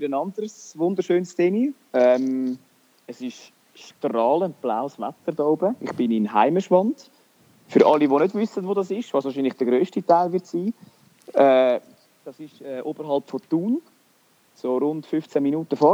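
Nothing stood out on listening to this audio.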